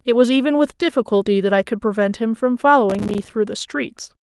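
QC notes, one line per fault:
2.90 to 3.35 s, processor overload crackle: a gritty, tearing burst of crackle rides on the speech for just under half a second, then stops abruptly. The machine was too busy to fill its audio buffers in time, and missed deadline after deadline. Each miss became a tiny hard-edged silent gap. The spacing of the clicks fits buffers of around 5 ms, with something like twenty dropped in quick succession.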